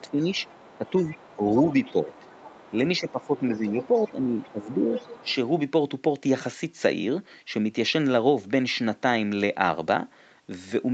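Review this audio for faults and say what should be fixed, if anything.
Speech suppressed in double talk: the voice dips by up to about 10 dB at 0.01–0.28 s, 0.76–1.41 s, 1.91–2.27 s (about 5 dB), 2.71–4.9 s and 5.22–5.26 s, likely from the echo canceller ducking both talkers at once. Packet loss would cut out regardless of the other side, but these dips line up with the other side talking.

Other side's voice leaking through: from 0.07 s to 5.35 s a second voice sits about 25 dB below the talker, likely loudspeaker echo the canceller didn't fully remove. Reverb would be a smeared tail of the talker's own voice, but this is a separate, independent voice.

To prevent both, use a headset or improve the echo canceller's tuning and double-talk detection so it removes the loudspeaker signal without pulling down the near-end voice.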